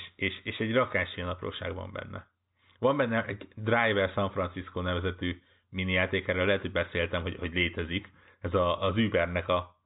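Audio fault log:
The speech has the narrow band of G.711 mu-law telephone coding at 64 kbps, with nothing heard above 3.8 kHz and at most a faint trace of quantisation noise following the level, and no fault can be heard.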